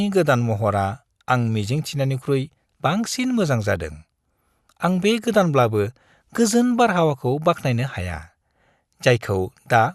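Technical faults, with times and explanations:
No technical faults can be heard in this speech recording.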